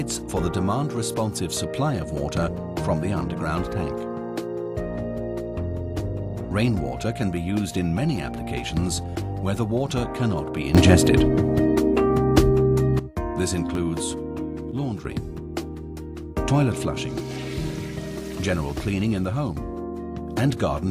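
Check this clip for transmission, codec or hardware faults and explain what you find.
Two kinds of fault turn up, each twice: brief buffer underruns and abrupt level steps.

Underrun with held sample, at 2.43 s and 13.75 s: the output ran dry for about 2.7 ms and 1.8 ms, and the converter held its last value. The first fits a 128-sample buffer. A few milliseconds of audio are lost each time, and the sound stops with little or no click. The waveform shows a short flat line; the spectrogram shows a thin vertical stripe.

Sudden gain jump, from 10.75 to 12.99 s (up about 12 dB) and from 14.72 to 15.05 s (down about 6 dB): the sound and its background noise step in level together, likely from a gain change applied without a ramp. The waveform envelope shows hard-edged steps, and the spectrogram brightens or darkens across every frequency at once.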